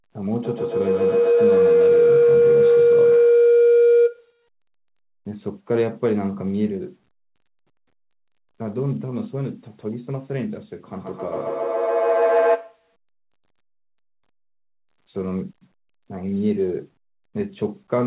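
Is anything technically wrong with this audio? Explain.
Yes. Feedback howl occurs from 0.44 to 4.47 s and again from 10.93 to 12.93 s. Two devices share the call, so the loop gains on each pass, building a tone around 500 Hz, then around 700 Hz, with the loop repeating roughly every 150 ms and peaking about 7 dB, then 5 dB, above the speech, all within the call codec's band that stops at 4 kHz.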